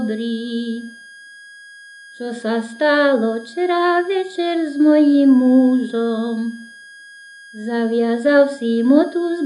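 From start to finish a switching supply whistle sits under the sound: a thin high tone wandering slightly between about 1.63 and 1.65 kHz, roughly 25 dB below the programme. A switching power supply is running in audible burst mode or beating with another one, so its regulation cycle falls into the hearing range. Unlike mains hum, it is high rather than low, has no ladder of 50 or 60 Hz harmonics, and its pitch drifts.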